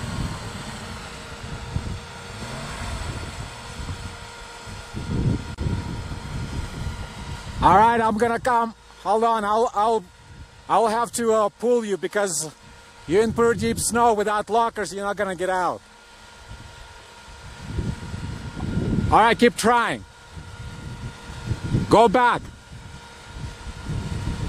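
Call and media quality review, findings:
Gap at a join of encoded pieces, 5.55 to 5.58 s: roughly 32 ms dropout in continuous sound, edges smeared, then picks up where it left off. Probable cause is separately encoded segments joined untrimmed, so encoder start delay and last-frame padding stay in.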